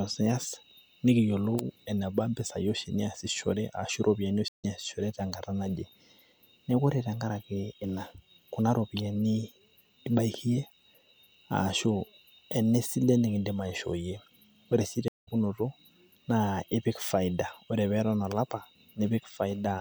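At 4.48 to 4.65 s and 15.08 to 15.28 s, stream reconnects cut the speech for 150 and 185 ms. It then resumes about 150 and 200 ms later, skipping material rather than simply pausing like a dropout.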